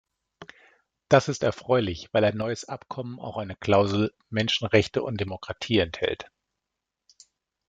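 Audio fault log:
2.42–3.64 s and 5.28–5.56 s, one channel drops out. The speech abruptly falls by about 6 dB for about 1.2 s, then again for about 0.28 s, and returns to full level each time. Each drop starts and ends as a clean step, not a fade. The likely cause is one stereo channel going silent while the other carries on. After the two channels are summed to mono, sound shared by both loses half its contribution. Anything present only in the lost channel vanishes for those spans.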